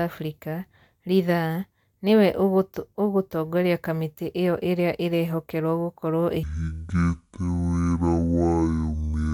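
A speech clip in which the final stretch, from 6.43 s to the end, is a section at the wrong speed, most likely because that part was played back or resampled against the wrong clock. It runs at half its recorded speed, so the voice there is dragged out to twice its natural length and drops by roughly ten semitones, turning deep, slow and heavy from the 6.43 s mark onward rather than drifting gradually.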